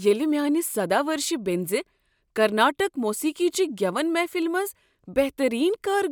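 No technical faults can be heard in this speech recording; the signal stays continuous and steady throughout.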